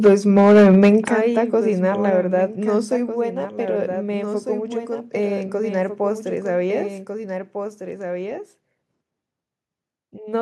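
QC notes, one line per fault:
Throughout: doubled audio track. A second full-band copy of the speech runs about a second and a half behind the original, roughly 5 dB quieter, and is likely an extra capture path or a misaligned edit. It is a clean duplicate with no decay or room colour, which sets it apart from an echo or reverb tail.
0.05 to 0.89 s: microphone overload. The peaks go about 6 dB over full scale and around a tenth of the samples are flattened, which gives the loudest syllables a harsh, crackling edge. The likely cause is input gain set too high at the converter. The distortion sits on the peaks instead of running through the quiet parts, so it is not codec noise.
0.07, 1.08 and 2.1 s: microphone volume stepped down. The speech and the background fall together in single steps of about 3 dB, 9 dB and 4 dB, with the first coming during the overloaded stretch. This likely comes from the call software lowering the device input level in response to the clipping. 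Because the level drops instantly and stays down without recovering, it does not sound like compressor pumping.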